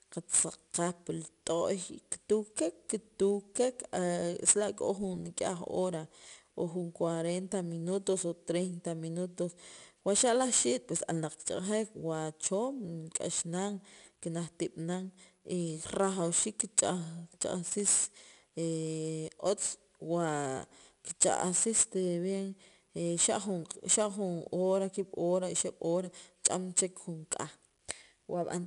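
Throughout, 4-bit ADPCM compression leaves gritty hiss that rises and falls with the speech, unlike steady background noise, and nothing above 10.6 kHz, which points to roughly 88 kbps.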